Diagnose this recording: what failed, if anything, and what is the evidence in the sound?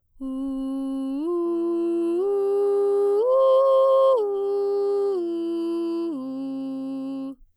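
The fault sits at the converter stage: periodic clock jitter. From 1.45 s to the end of the music, a rough, metallic edge rides on the sound. The sampling clock is being shaken at a steady rate, around 100 Hz. That timing wobble modulates every component. Each one gains sidebands above and below it, spaced by that rate. Higher-pitched content suffers most, so the grit is clearest at the top. Silence would carry none of it.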